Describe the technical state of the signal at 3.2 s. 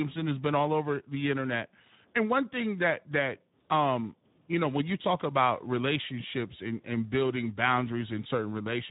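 At 3.2 s the speech is still passing through Speex coding, as it does for the whole clip. The CELP coder has too few bits for its excitation, consistent with roughly 11 kbps, so the sound turns plainly hoarse and noisy, with nothing above 3.8 kHz.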